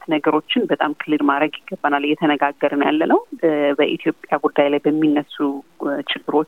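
The audio was likely reduced to very few bits by plain truncation without dither, with a coarseness that fits about 9 bits. Throughout, quiet passages turn grainy and gritty, with distortion around 45 dB below the signal that tracks and changes with the sound.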